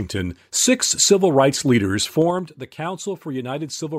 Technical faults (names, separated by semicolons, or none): zipper noise